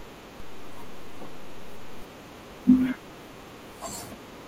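At 0.4 s there's a DC step. The waveform's zero line suddenly jumps, like an offset input switching in, and you hear a low thump. The offset lasts until about 2.02 s. The speech runs through unchanged.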